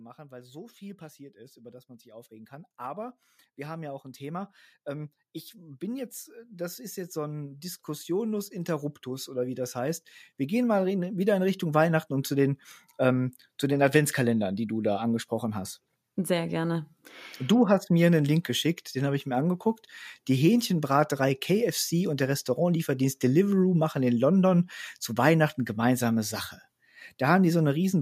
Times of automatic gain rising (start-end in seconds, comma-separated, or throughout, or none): 0.28-11.90